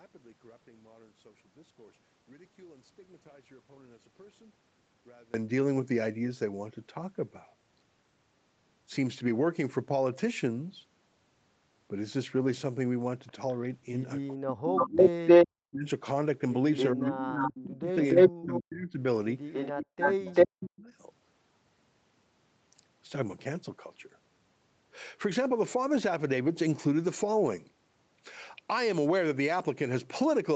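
This speech recording has a second, delayed copy of the voice in its middle section. A very faint trace about 432 ms behind appears briefly from 13.27 to 13.55 s. Then a much stronger copy trailing by 292 ms, at times louder than the direct speech, runs from 14.52 to 15.48 s, 16.76 to 18.59 s and 19.53 to 20.7 s. This is echo leak, likely from a far end on loudspeaker whose echo canceller let its microphone pickup through and sent it back.

Over nearly the same stretches the main voice sinks and breaks up: from 14.38 to 15.87 s, 16.93 to 19.0 s and 19.81 to 20.9 s it dips, by roughly 30 to 40 dB at worst, for about a second, a second and a half and under a second of those spans. That is speech suppressed in double talk, likely the canceller failing to separate the talker from the returning echo and attenuating both. The audio reaches up to 8 kHz, as expected from call microphone processing.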